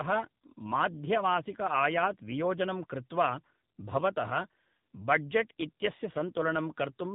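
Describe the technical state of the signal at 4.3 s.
Tandem speech coding is at work here, as it is through the whole clip. The speech has passed through two speech codecs in a row, an ADPCM stage that fits G.726 and then a low-rate coder consistent with AMR-NB, with the later stage re-encoding the earlier one's already degraded output. At 4.3 s this shows as rough, warbly speech that sounds more muffled than a single coding pass would leave it, with nothing above 3.8 kHz.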